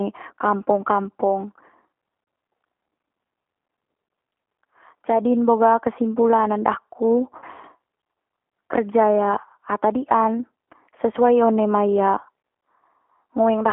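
G.729 codec damage runs through the whole speech clip and is plainly audible. The speech is rebuilt from a vocal tract filter, a pitch predictor and a handful of pulses per frame, so it sounds slightly rough and synthetic. The band is limited to roughly 200 Hz to 3.4 kHz, removing low warmth and upper sibilance. This fits the 8 kbit/s G.729A variant.

VoIP packet loss concealed by the speech codec occurs from 7.38 to 7.45 s, where about 40 ms of audio went missing, consistent with two lost packets. The decoder filled the gap by extrapolating from its last pitch and filter settings while lowering the gain, so the sound stretches into a brief buzzy tone or coloured noise that fades. Because each frame builds on the previous one, the speech stays weakened and distorted slightly past 7.45 s before it recovers.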